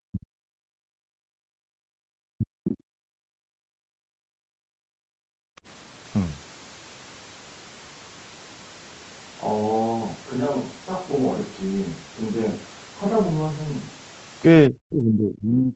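Speech recorded through a call, with two kinds of echo-canceller trouble. The talker gets chopped down hard in three spots: from the start to 0.38 s, from 2.33 to 2.97 s, and from 14.69 s through the end of the clip. Each time the level falls by something like 40 dB, nearly to silence. That's most likely speech suppressed in double talk. The far end was talking at the same moment, the canceller couldn't tell the local voice apart from the loudspeaker echo, and it turned the whole thing down. Separately, from 3.25 to 5.63 s the background gets gated by the echo canceller. The room tone sinks by about 37 dB while the loudspeaker plays and comes back once the canceller lets go, roughly two seconds of missing ambience in total. Throughout the clip there's nothing above 8 kHz, which is the call codec's bandwidth limit rather than a fault.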